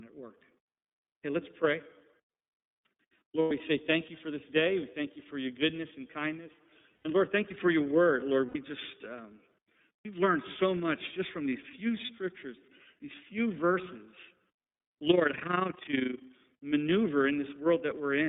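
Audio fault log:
Throughout: iLBC codec. The whole recording sits in a narrow phone-line band, roughly 150 Hz to 3.7 kHz, so there's no air or sparkle up top and the low end is thin. The codec coloring is plainly audible, with that slightly rough, synthetic edge on the speech that comes from coding each frame's excitation on its own. The sound fits iLBC's 13.33 kbps mode with 30 ms frames.
3.42–3.51, 6.96–7.06, 8.46–8.56, 9.99–10.06, 12.05–12.10 s: lost iLBC frames. These are short dropouts where the decoder filled the gap by repeating the last pitch cycle with some noise mixed in, so each one comes across as a brief held, faintly buzzy vowel. The first three gaps are 90 ms long, the fourth is 60 ms and the last is 30 ms. The one at 3.42 s lands right before "say thank you for" and the one at 8.46 s right before "just um". The 9.99 s gap falls after "just um" and before "learned so much just". 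Because iLBC frames stand alone, the speech snaps back clean right after each gap.
15.08–16.25 s: overlap-add ripple. For a bit over a second the level pumps up and down by about 11 dB, somewhere around 30 times a second. That gives a fast, rough, robotic flutter riding on the speech. It happens when the audio gets chopped into windowed frames and stitched back together with overlaps that don't add up to a steady gain, so every frame boundary leaves a bump or a dip in loudness.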